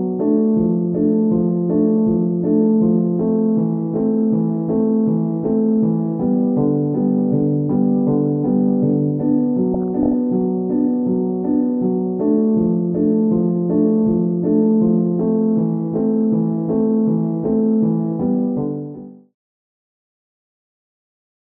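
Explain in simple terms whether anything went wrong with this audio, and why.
Something did go wrong, briefly, between 9.74 and 10.13 s: a burst of DAB burbling. It sounds like short blips of noise laid over the audio. Weak digital radio reception let some corrupted data slip past the error correction, roughly 0.4 percent of the bits. The damage points to about 18 frames. The fade-out ending at 19.36 s is smooth.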